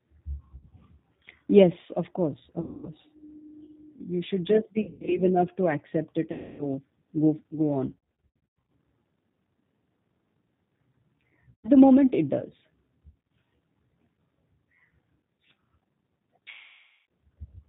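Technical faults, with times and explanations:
throughout: G.729 codec. The speech has passed through an 8 kbit/s G.729A link, which rebuilds each 10 ms frame from a vocal tract filter, a pitch predictor and a handful of pulses, and drops everything above 4 kHz. The voice is muffled and plainly rough and synthetic.
0.55–0.66, 2.61–2.89, 4.81–5.21, 6.32–6.67, 7.91–8.70, 11.50–11.70, 13.10–13.19, 16.51–17.03 s: VoIP packet loss concealed by the speech codec. Packets went missing and the decoder filled the gaps by extending its last pitch and filter with falling gain. The loss at 2.61 s follows "of course", the one at 11.50 s comes just before "the moment it does", and the one at 13.10 s follows it. Each gap turns into a stretched buzzy tone or coloured noise that fades. The 4.81, 7.91 and 13.10 s episodes are broken runs. Speech stays weak and distorted briefly afterwards.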